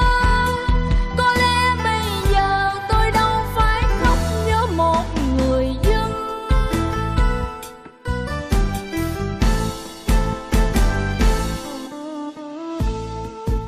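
A brief glitch breaks in from 11.85 to 11.88 s. This is damaged data in a compressed stream: corrupted bytes there made the decoder misread those frames, lose sync and jump forward to the next valid frame header.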